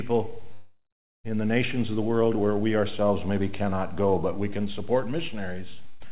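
From 0.53 to 1.27 s the stream was likely interrupted by a long network dropout. About 0.72 s of audio never arrives. The receiver stretches the last sound into a fading buzz or hiss, then leaves roughly half a second of silence before the audio resumes further on.

At 5.89 s a burst of packet loss removes about 120 ms. The receiver holds the last sound for about 110 ms and turns it down as it goes on. Sound picks up again at 6.08 s with that stretch missing. Nothing above 4 kHz is present, which fits a narrowband 64 kbps G.711 call path.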